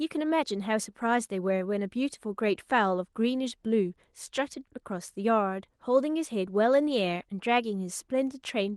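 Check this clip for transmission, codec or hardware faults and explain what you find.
No faults can be heard in this clip.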